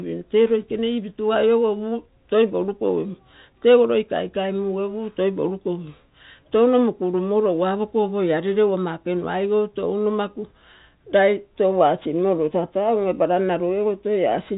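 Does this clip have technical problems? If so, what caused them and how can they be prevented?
No, the speech carries no technical fault that needs explaining or preventing. It comes through G.711 telephone coding, so nothing above 3.8 kHz is present and only a faint quantisation hiss tracks the level of the voice, which is how that format normally sounds.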